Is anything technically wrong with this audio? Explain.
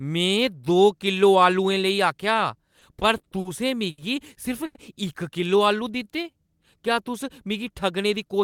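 Yes, there are three kinds of network playout fault.

From 2.79 to 3.47 s, repeated stalls (stutter) occur. Late packets emptied the jitter buffer four times, and the receiver extended the last sound for 110 ms in total, with the longest gap 50 ms. The speech drags and stutters.

At 3.91 s and 4.66 s, there is a short stall from a late packet, lasting 70 ms and 90 ms. Each time the buffer ran dry, the last sound was stretched until the packet arrived, so a sound is held too long, with a slight buzz or dip.

From 5.41 to 6.48 s, a jitter buffer slow-down adds 109 ms. The receiver repeated pitch periods to rebuild its reserve, so the speech plays at 91% speed at the same pitch and sounds drawn out.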